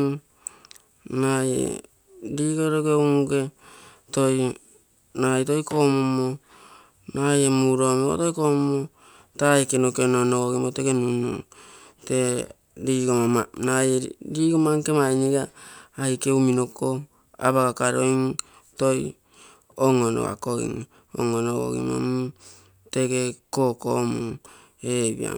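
Listening closely to the speech, nothing stood out as a technical fault at any point.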